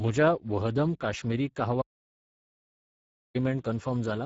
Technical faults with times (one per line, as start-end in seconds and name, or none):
0.00-4.25 Speex codec
1.82-3.35 audio dropout to silence